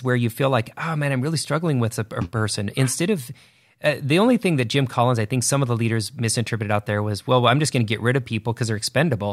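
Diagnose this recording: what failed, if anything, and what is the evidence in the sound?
A bit error spike sits at 1.04 s, between "you feel like oh" and "I'm really struggling with": one isolated sample jumps to about -31 dBFS and snaps back, heard as a single broadband tick unrelated to the speech. A flipped bit in memory, storage or a digital link caused it.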